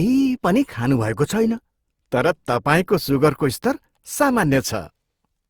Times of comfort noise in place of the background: none

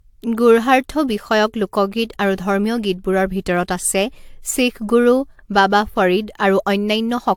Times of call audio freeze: none

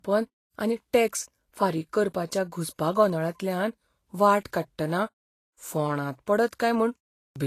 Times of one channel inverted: none

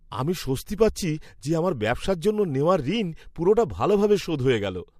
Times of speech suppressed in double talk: none

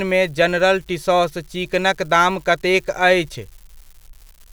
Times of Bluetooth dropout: none

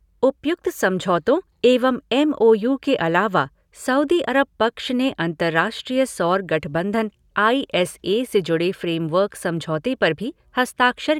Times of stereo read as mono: none

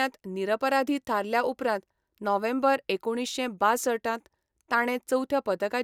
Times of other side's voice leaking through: none

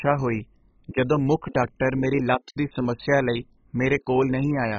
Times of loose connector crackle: none

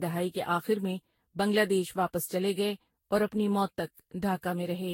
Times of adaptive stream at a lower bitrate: none

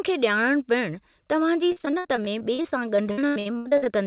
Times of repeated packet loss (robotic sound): 1.72-3.87

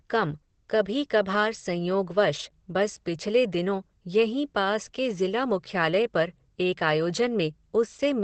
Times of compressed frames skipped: none

